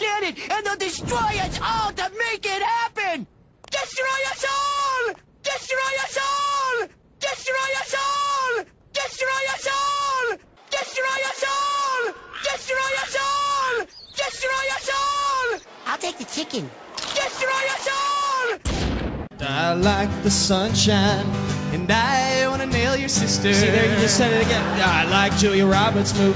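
No technical faults are audible.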